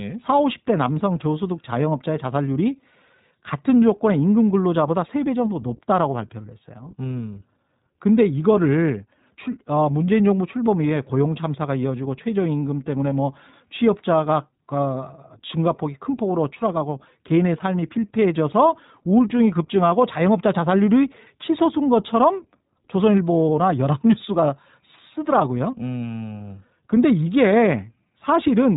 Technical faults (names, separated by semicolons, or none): iLBC codec